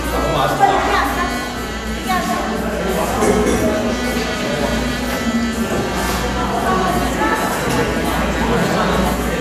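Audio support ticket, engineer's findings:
Dull top end, granular gurgle throughout. Likely MP2 compression at a low rate, sounding like about 80 kbps: upper sub-bands starved of bits and dropped, remaining bands coarsely quantised, so treble flickers in and out.

Brief burst of sub-band noise blips, 8.31–8.38 s. DAB burbling from weak reception: a bit error rate around 0.2 percent gets past error correction into the MP2 stream. Corrupted samples across 6 frames put short blips of noise in single sub-bands.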